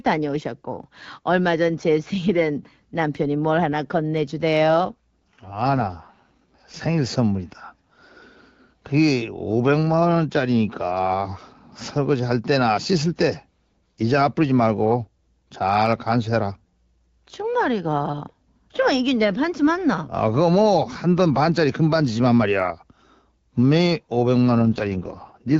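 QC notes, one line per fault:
4.68–6.85 s and 24.60 s to the end, AMR rate drop: the HD Voice speech turns rough and synthetic, consistent with the codec falling from 12.65 to 6.6 kbit/s. Unlike a bandwidth switch or packet loss, the audio band stays full and there is no gap.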